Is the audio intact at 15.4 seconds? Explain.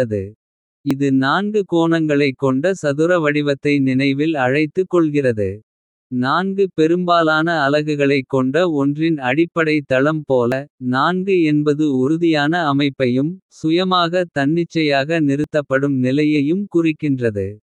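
No. At 15.44 s there is a dropped buffer (overrun), likely because the recording program failed to collect its samples before the hardware overwrote them. Roughly 20 ms of the speech is lost, and the two sides join directly with no silence, so you hear a small jump forward.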